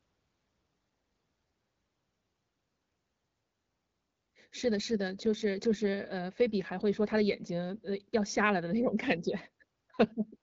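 No technical faults are audible.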